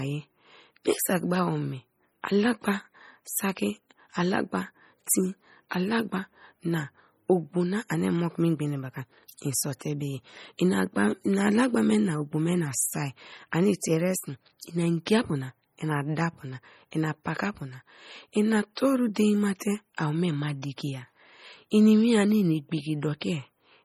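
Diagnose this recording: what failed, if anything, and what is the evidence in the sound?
The codec stage is where this recording failed, most likely through heavy MP3 compression. Across the whole speech clip the sound is watery and swirly, with fine detail flickering in and out as weak frequency components are dropped and restored from frame to frame, and sibilants turning metallic and chirpy. The damage is severe enough to fit a low bitrate of about 32 kbps. Content stops at 20.9 kHz.

The same codec stage also produces MP3 pre-echo in a cluster of three events near the end, at 19.14 s, from 19.59 to 19.61 s, and at 19.97 s. Before each sharp onset a short hiss of roughly 16 to 21 ms is audible, and the attack itself sounds softened. The transform block spreads quantisation noise sized for the loud onset evenly across its length, so the quiet moment just before each attack is filled with that noise.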